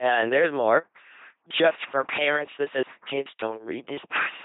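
The speech runs through an LPC-10 vocoder throughout, giving a buzzy, mechanical robot voice at 2.4 kbit/s with heavy damage. A spectrogram shows nothing above 3.8 kHz and pulse-train harmonics.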